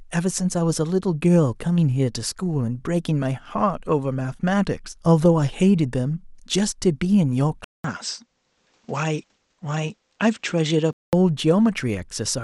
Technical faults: input switched to a poorer device

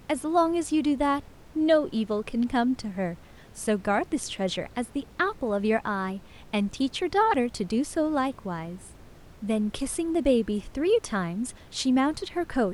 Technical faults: none

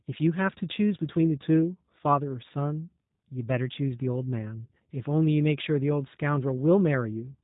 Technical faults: G.729 codec

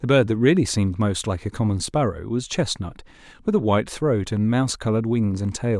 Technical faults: none

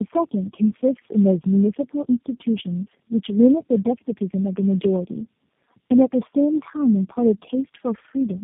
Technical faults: tandem speech coding

